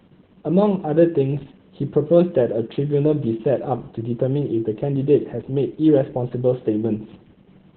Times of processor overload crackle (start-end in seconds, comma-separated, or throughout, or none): none